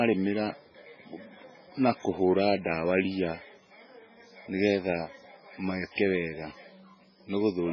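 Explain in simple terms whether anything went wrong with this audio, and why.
Throughout the speech, the sound is dull and watery. Nothing comes through above about 6.5 kHz, so s sounds lose their crispness. The cause is likely heavy MP3 compression, which dropped the treble and let faint details flicker in and out, giving a swirly quality.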